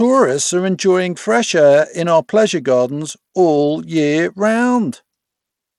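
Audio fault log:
throughout, Bluetooth SBC compression: plainly audible codec damage across the whole speech clip, with the upper frequencies thinned and unsteady and a gritty, grainy layer sitting on the sound. The likely cause is an SBC Bluetooth link running a small bit pool: the top sub-bands receive too few bits to hold their detail, while the remaining bands are coarsely quantised, leaving grit and aliasing, which fits a rate of about 96 kbps.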